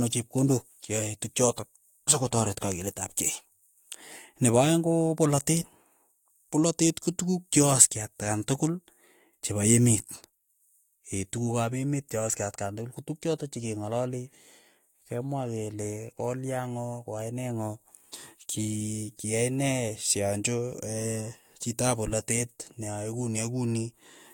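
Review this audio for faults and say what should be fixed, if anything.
Nothing stood out on listening to the speech, so there is nothing here that needs fixing.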